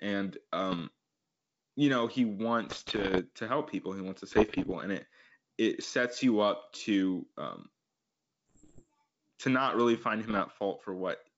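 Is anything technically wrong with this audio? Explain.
Yes. Bit errors on an ADPCM link corrupt the speech in five bursts: 0.70–0.82 s, 2.68–3.21 s, 4.31–4.73 s, 8.49–8.87 s and 10.28–10.41 s. Error rates are around one percent, highest in the longest burst. Each flipped bit throws off the decoder's step size and prediction, so the error keeps ringing for a few milliseconds. The result is pops, rough bursts and brief jumps in level. The underlying wideband coding, which fits G.722 at 64 kbit/s, carries the speech up to about 7 kHz.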